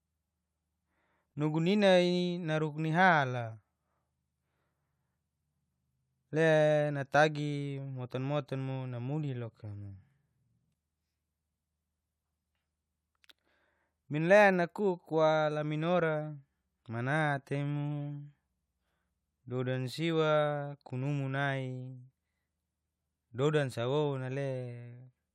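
No technical faults can be heard anywhere in the speech recording. There is nothing to place on a timeline or describe as a fault.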